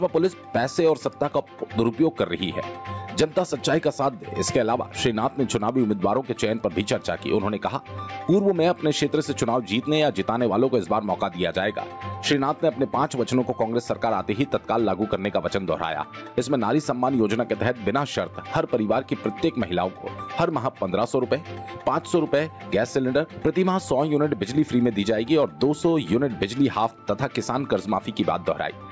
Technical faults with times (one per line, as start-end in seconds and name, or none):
0.00-28.92 gain pumping